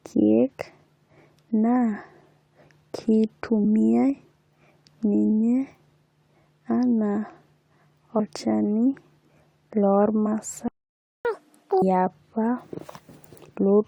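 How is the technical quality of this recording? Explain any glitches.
There are a few glitches here, all on the playback side: three small skips, a dropout and a fast-forward burst right after it.

The compressed frames skipped happen at 3.63 s, from 8.19 to 8.21 s, and at 10.25 s. In each case the decoder dropped whole chunks of the compressed stream, either because they were missing or because they were rejected as damaged. The jumps fit a frame length of 23.2 ms. The first loses about 50 ms of audio, and the other two lose about 70 ms each. Because adjacent frames overlap, you don't get a sharp click. You hear a quick smeared blip where the speech lurches forward a little.

The playback stall runs from 10.68 to 11.25 s, so the speech cuts out for about 0.57 s. The player most likely starved for data or had its thread blocked, and it simply output nothing until it recovered. It's a clear gap in the middle of the flow rather than a natural pause.

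Straight after that, from 11.25 to 11.82 s, comes the catch-up at higher speed. The player resamples its backlog to claw back the lost time, so it runs at 2x. Speed and pitch jump together, about ten semitones up, which gives a brief chipmunk-style rush before things settle back to normal.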